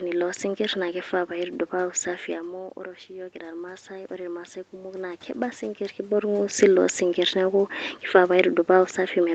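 From 2.76 to 5.90 s, after "kifaa paaku safi amu", automatic gain rising lifts level about 6 dB; room noise swells with the voice, unlike the talker moving.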